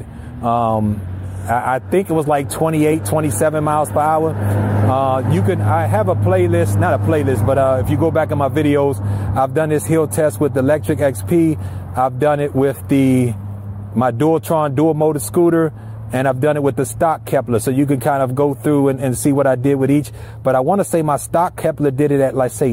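Nothing stood out as a technical problem on listening to this recording.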